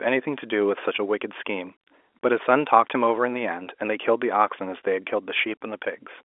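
No technical faults are present in the speech, which sits inside a G.711 mu-law telephone channel at 64 kbps, with its band running from 300 Hz to 3.5 kHz and nothing audible above 3.7 kHz.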